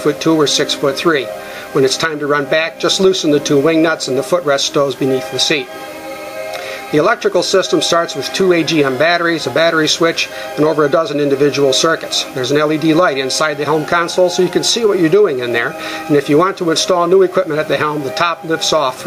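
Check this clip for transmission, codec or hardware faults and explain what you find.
One fault is present throughout: gain pumping. Input gain was likely set far too high, so a fast limiter clamps each loud sound, making the gain swing by around 10 dB.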